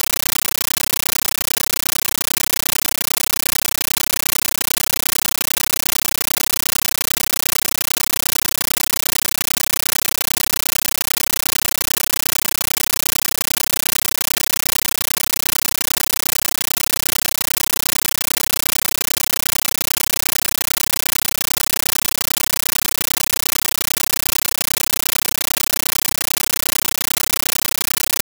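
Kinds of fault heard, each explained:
Compressed stream played as audio: an encoded AC-3 stream reaches the output as raw samples instead of being decoded, so the speech is replaced for the whole clip by very loud, harsh static. Each 13.3 ms burst of noise is followed by silent padding, repeating at 31.25 Hz, which gives a steady chattering rhythm. The burst density points to a high-rate stream, around 640 kbps. Unlike broadband hiss or digital clipping, no speech survives underneath.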